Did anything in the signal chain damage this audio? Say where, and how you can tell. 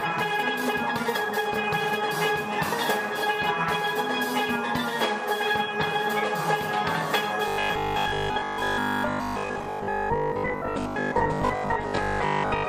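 Yes. From the start to 2.14 s the audio runs noticeably fast, about 1.39 times normal speed, yet its pitch holds steady. That section sounds rushed, and the pace relaxes abruptly at 2.14 s. This is a time-stretched section, likely from a processing or playback stage squeezing the audio to fit a shorter slot and preserving pitch by dropping brief fragments.

From 7.48 s to 12.68 s the sound turns rigid and metallic, with a fixed 50 Hz buzz that still loosely tracks the underlying audio. This is robotic sound from repeated short buffers, pointing to the driver or buffer stage. New audio arrived too seldom, so the last chunk kept replaying, and the 50 Hz pitch fits a 20 ms buffer. Most of that stretch, roughly two-thirds or more, is repeated material, likely from buffer underruns.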